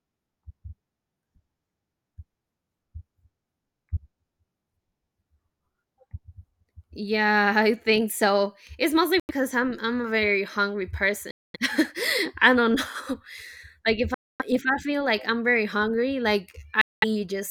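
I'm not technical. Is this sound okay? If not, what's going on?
No. The speech cuts to silence four times: at 9.20 s just before "I'm I'm a very", at 11.31 s, at 14.14 s just before "if I feel like", and at 16.81 s right after "I'm very hungry like". Each gap lasts about a tenth to a quarter of a second, then the sound jumps ahead. This is a Bluetooth dropout, likely from wireless audio packets arriving too late and being skipped.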